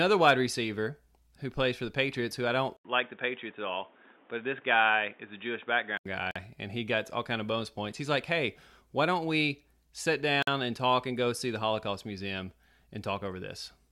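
At 2.77 s, just after "who I", the speech goes dull and band-limited with nothing above 3.7 kHz, following an 80 ms silence. The likely cause is an input switched to a poorer device. Its background noise sits roughly 30 dB under the speech, and the level barely changes. Full bandwidth returns at 6.06 s.

Two gaps at joins of encoded pieces follow: a 45 ms silence at 6.31 s before "and he got all", and a 48 ms silence at 10.43 s between "why don't we sit" and "and talk and go". Separately encoded segments kept their start delay and end padding, so the continuous speech drops out with smeared edges and then resumes where it stopped.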